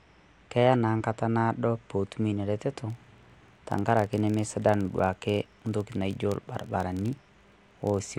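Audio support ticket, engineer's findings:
Filter restarted on every block, 2.90 s to end of clip, starting just after "naado pootum ina reteto". Symptom: buzz at about 43 Hz under the speech, tracking its level. Probable component: a block-based filter stage losing its state at each boundary. Each block starts from silence and opens with a small transient. The tick rate fits a 1024-sample buffer.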